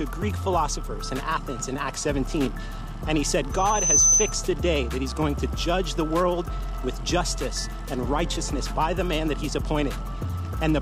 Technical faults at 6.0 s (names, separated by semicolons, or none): none